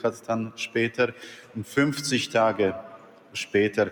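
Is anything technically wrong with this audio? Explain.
Yes. A noise suppressor meant for speech was left running across the whole clip, mistaking steady tones, ambience and decaying tails for noise. Its gain keeps swinging by roughly 10 dB, so sustained parts sink while attacks pass, making the audio pump and thin.

The same suppressor also caused sound cut by the noise suppressor from 1.13 to 1.56 s and from 2.83 to 3.35 s. Each time it clamped down hardest, pulling the level about 8 dB below its surroundings, so held sound and tails drop away abruptly.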